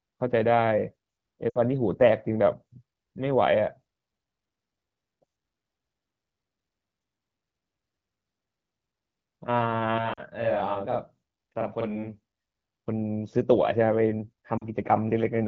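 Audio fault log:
1.49–1.58 s, 10.13–10.22 s and 14.57–14.67 s, lost AMR speech frames: gaps of 60, 40 and 40 ms, consistent with three and two 20 ms frames. The wideband decoder repeats the last pitch and vocal tract settings at falling gain, so the speech briefly dips toward near silence, then returns weak or rough for a moment.
9.98–12.4 s, channel delay (doubling): one channel arrives 42.67 ms late, which fits a 2048-sample buffer. Summed to mono, the late copy sits at equal level behind the original, giving a distinct doubled or slapback quality to the speech across this span.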